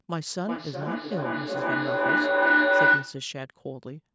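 A microphone-to-loudspeaker loop between two devices on the same call gained level on every pass, producing feedback howl from 0.46 to 3.32 s. The sound narrows into a tone near 1.5 kHz, pulsing roughly every 400 ms and peaking about 11 dB above the speech.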